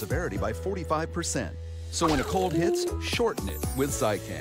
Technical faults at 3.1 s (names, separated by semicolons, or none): train of clicks